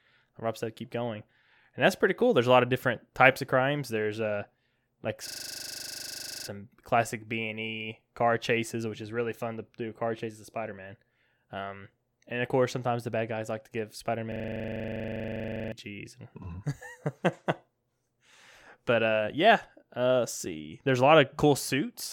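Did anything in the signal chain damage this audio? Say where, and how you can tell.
Yes. A system hang loop struck twice, at the driver or buffer stage. At 5.28–6.48 s and 14.32–15.72 s, one 40 ms slice repeats, buzzing at 25 Hz. The host froze, and the hardware kept replaying its ring buffer.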